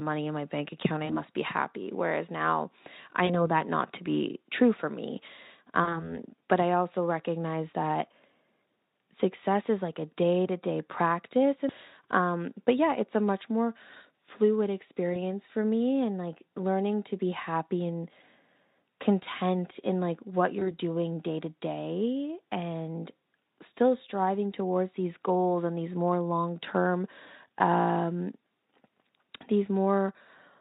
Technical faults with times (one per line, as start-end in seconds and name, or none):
1.05-1.24 VoIP packet loss concealed by the speech codec
3.25-3.48 VoIP packet loss concealed by the speech codec
5.83-6.11 VoIP packet loss concealed by the speech codec
15.13-15.17 VoIP packet loss concealed by the speech codec
20.59-20.72 VoIP packet loss concealed by the speech codec